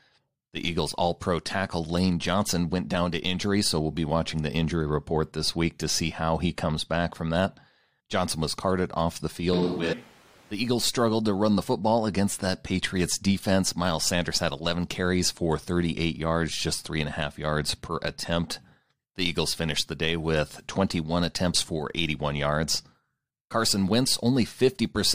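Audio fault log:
9.53–10.51 s, switch to a distant microphone: Right after "was carted off the", the sound turns roomy and hollow, with thinner bass. Level barely changes. Room noise rises to roughly 30 dB below the speech. The likely cause is the close microphone dropping out, leaving a farther pickup.
9.92–9.94 s, stream segment skipped: The audio jumps forward abruptly, with a small blip at the join. Part of the speech is missing. The likely cause is a streamed segment that failed to load, so the player went straight to the next one.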